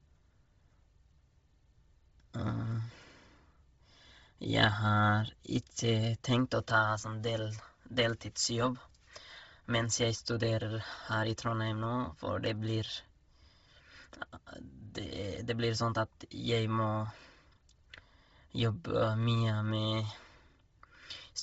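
From start to finish the speech sits under heavy codec damage. Nothing gets through above about 7.7 kHz, and the top of the band that's left has a breathy, grainy sheen where noise has been filled in over zeroed-out spectrum. That's most likely Bluetooth LC3 compression, the LE Audio transform codec, running short frames and a low bitrate. The roughness fits something around 24 kbps with 7.5 ms frames.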